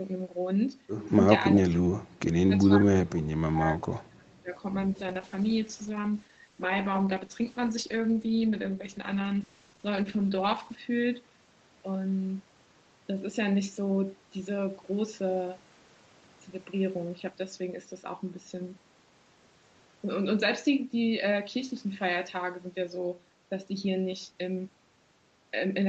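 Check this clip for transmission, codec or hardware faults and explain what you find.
Two faults stand out: two stretches of speech suppressed in double talk, then a call bitrate drop.

From 1.38 to 3.80 s and again from 4.02 to 4.52 s, the speech sinks in chunks by as much as about 35 dB. The likely cause is an echo canceller that couldn't separate the talker from loudspeaker echo during simultaneous speech, and so turned both down. Packet loss would sound clipped or robotic. Here the level is pushed down whole.

From 4.97 to 11.27 s the speech turns rough and watery. It stays at its coarsest for about 5.8 s before clearing. This fits the Opus encoder being told to spend far fewer bits, roughly from 32 kbps down to about 9 kbps, after the bandwidth estimate fell. The steady 8 kHz ceiling of the call path runs through the whole clip. This stretch differs because the texture degrades while the loudness holds, which also separates it from the double-talk dips.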